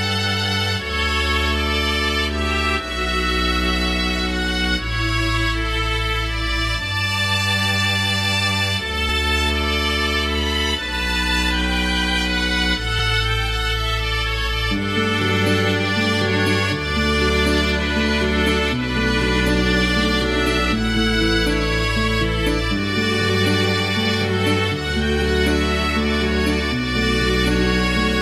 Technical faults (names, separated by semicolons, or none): compressed frames skipped